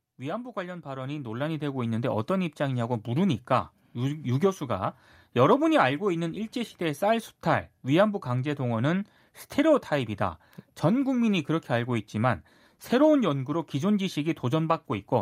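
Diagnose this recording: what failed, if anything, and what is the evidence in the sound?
From 0.05 s to about 4.97 s the speech and the background noise floor swell together, climbing about 12 dB before settling. This is automatic gain rising in the call-processing stage: the AGC judged the input too quiet and ramped its gain up gradually.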